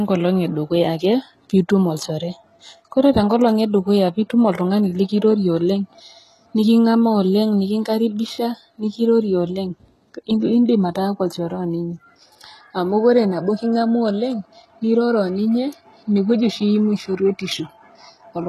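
From start to finish, the speech has most likely been through HE-AAC compression at a very low rate, consistent with about 16 kbps. Only the lower band seems to be coded directly, and the treble is rebuilt by copying lower bands upward under a coarse envelope. The damage is plainly audible: s sounds come out gritty and lispy, the upper range has a metallic sheen that doesn't line up with the voice beneath it, and nothing sounds above 12.3 kHz.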